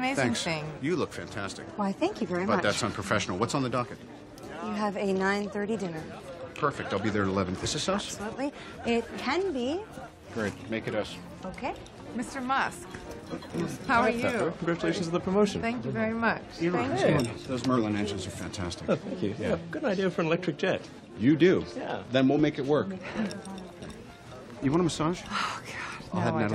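No technical faults were heard anywhere in the recording.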